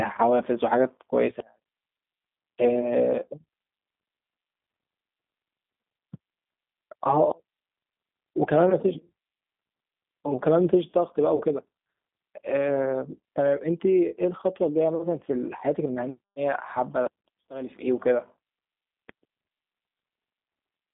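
From the start, the audio carries the sound of the G.729 codec. The band runs only from about 200 Hz to 3.6 kHz, so it is thin and boxy. The speech is rebuilt from a vocal tract filter, a pitch predictor and a few pulses per frame. That gives a plainly audible roughness and a synthetic edge. The character fits an 8 kbit/s G.729A stream.

At 11.36 s, VoIP packet loss concealed by the speech codec takes over until 11.43 s. About 40 ms of audio is missing, which fits two lost packets. The decoder fills the gap by repeating its last pitch and filter at falling gain. The sound smears into a brief stretched sound that fades. Because each frame leans on the one before, the speech stays weak or distorted for a moment after 11.43 s.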